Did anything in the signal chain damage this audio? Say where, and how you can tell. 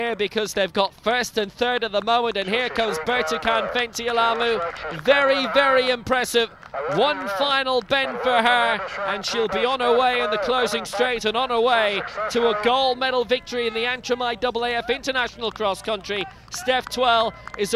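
Yes: a single sharp click at 14.11 s, likely dropped samples at the driver or buffer stage. A couple of samples vanish, so the waveform jumps, with no audible gap unlike a dropout.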